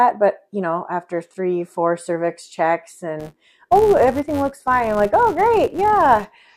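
From 3.2 s to the end, a filter restarted on every block. It drops its state each time, leaving a level-following 188 Hz buzz, which fits 256-sample blocks.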